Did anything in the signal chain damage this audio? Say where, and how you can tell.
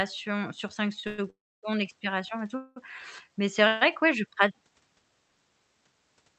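Yes. A short stall from a late packet occurs at 1.00 to 1.05 s, before "expirations et tout". The jitter buffer emptied and held the sound 32 ms too long.

Call audio freezes occur at 1.07 to 1.20 s, 1.30 to 1.65 s, and 2.57 to 2.78 s. Each stretches the sound, fading to silence in the second. Likely cause: packets delayed on the network.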